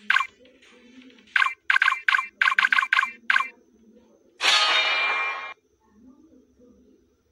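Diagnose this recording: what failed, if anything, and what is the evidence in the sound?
Nothing failed; no fault is audible anywhere.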